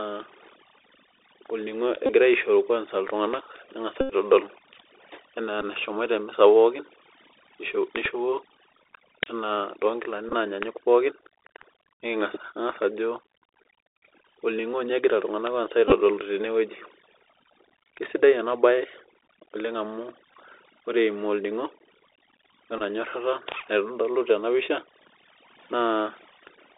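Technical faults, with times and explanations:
throughout: overdone noise removal. The background is pushed down and breaks up into twinkling specks.
throughout: Bluetooth CVSD headset codec. Audio sits in roughly a 200 Hz to 3.7 kHz band at 64 kbps, with scratchy s sounds and a granular hiss from the one-bit up/down coding.
2.06–2.10, 4.01–4.13, 5.61–5.64, 8.04–8.07, 10.29–10.34, 15.88–15.94, 20.33, 22.78–22.81 s: Bluetooth headset packet repeated. Lost packets were replaced by replaying the previous one. The 86 ms run at 4.01 s gives a buzz near 267 Hz, and the shorter ones come across as brief ticks or buzzy blips.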